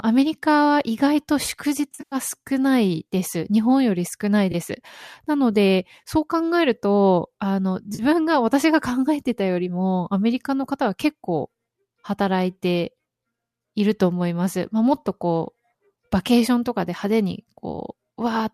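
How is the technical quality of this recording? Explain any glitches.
The recording has three short dropouts, each consistent with AAC frame loss with concealment, over a light coding texture likely from low-delay AAC at 64 kbps.

AAC frame loss with concealment occurs at 1.92 to 2.16 s (170 ms lost, scattered across 200 ms, longest run around a tenth of a second), at 4.52 s (20 ms) and at 7.95 to 8.02 s (40 ms). Missing frames are rebuilt from the last good spectrum, giving smeared, noisy or phasey patches. On a spectrogram, harmonic lines blur into diffuse energy; the waveform loses crisp structure there.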